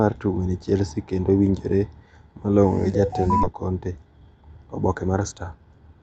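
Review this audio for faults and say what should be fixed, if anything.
At about 3.43 to 3.45 s there is a skip ahead. About a second of audio was discarded, either lost in transit or dropped by an overflowing jitter buffer, while later audio was already queued. Playback jumps straight forward with no filler, joining the two sides almost directly. Sizing the jitter buffer so it absorbs bursts without overflowing, or concealing the loss rather than cutting it, would prevent this.

From 3.53 to 5.95 s there is a jitter buffer speed-up. After the backlog built up, the receiver repeatedly removed pitch-period-sized pieces to shrink its delay, about 0.3 s in total. The speech runs at about 113% of normal speed with unchanged pitch and sounds hurried. Draining excess delay more gradually, or spreading removals into pauses, would prevent this.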